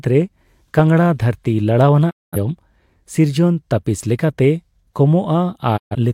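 A digital broadcast dropout mutes the speech at 2.09 s, with a fade of about 20 ms into silence, and the sound returns at 2.37 s. The receiver stopped getting usable frames and held the output silent until clean ones arrived, so that stretch of programme is simply gone. The hole fits roughly five lost frames. A second, shorter dropout follows from 5.76 to 5.95 s, the same quick fade to silence, which fits about three frames.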